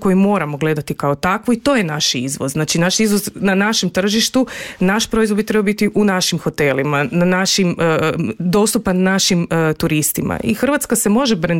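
Wi-Fi interference runs from 3.60 to 5.97 s as a faint, even ticking, roughly 45 dB below the signal, repeating about ten times a second. A Wi-Fi radio sitting close to the audio circuitry transmits a beacon every 102.4 ms, and the circuit rectifies those radio-frequency pulses into the audio band. Each beacon becomes a small click, and the steady 102.4 ms spacing gives the ticking its regular rhythm.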